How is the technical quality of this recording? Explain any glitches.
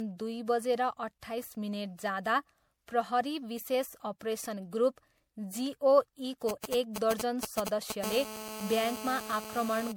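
The recording is degraded by repeated lossy coding throughout and by mobile-phone interference in the last few seconds.

Throughout, the likely cause is generation loss: the audio was probably decoded and re-encoded as MP3 several times, in a way that fits a 96 kbit/s chain. Each pass quantised again on a shifted frame grid, so the errors stacked up. The speech sounds swirly, hollow and smeared, with softened consonant attacks.

From 6.49 to 7.92 s come GSM signalling bursts. A nearby 2G phone sent short groups of radio pulses at 217 Hz while signalling, and the audio circuitry rectified them. The result is a galloping dit-dit-dit of short 217 Hz buzzes, only slightly quieter than the speech.

From 8.04 to 9.92 s there is GSM phone buzz. The phone, now in a call, transmitted continuously in bursts 217 times a second, which the circuitry again rectified. This produces a steady, raspy 217 Hz buzz rich in harmonics, about 10 dB below the speech.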